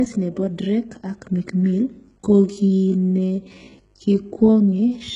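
From the first moment to the last, a mains buzz sits under the speech: a steady, raspy drone built on 50 Hz, roughly 40 dB below the speech. Sharp switching spikes, twice per mains cycle, from something like a dimmer or rectifier, put energy into a whole ladder of harmonics. On a spectrogram this shows as evenly spaced horizontal lines at multiples of 50 Hz running unbroken across the full width and climbing well into the kilohertz range.

Throughout, the treble has a synthetic, gritty edge. The s sounds come out metallic and lisped, and the upper band lacks the harmonic detail of the lows and mids. This is likely HE-AAC compression at a very low bitrate, something around 12 kbps, with heavy damage. The codec kept only the lower spectrum and rebuilt the top by copying lower bands upward under a coarse envelope, so the harmonics do not line up across the crossover. A spectrogram shows smeared, blocky texture in the upper band and repeated patterns echoing the band below.

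From 2.16 s to the end, the pace abruptly drops to about 0.715 times normal speed while the pitch stays put. This is likely a time-stretched section. Software lengthened the audio to fill a target duration and kept the pitch by repeating short slices, which leaves the speech dragging. On a spectrogram the syllables stretch wider, and the waveform shows repeated short segments where transients should be crisp.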